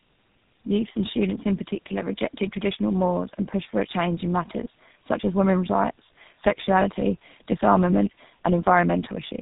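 Tandem speech coding throughout: two low-rate speech codecs in series, consistent with G.729A then GSM full rate, recoding each other's damage, leaving rough, warbly, muffled sound with nothing above 3.8 kHz.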